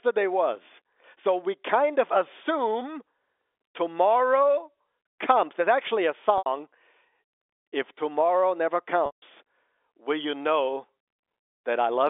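At 6.38 s the speech briefly freezes into a held, slightly buzzy tone for 80 ms. At 9.06 s a longer 160 ms gap holds, fades to silence, and then cross-fades back into the speech. Both are packet loss with pitch repetition: the receiver filled the missing audio by repeating the last pitch period and fading it out. The gap lengths fit lost 20 ms packets on the narrowband G.711 telephone line.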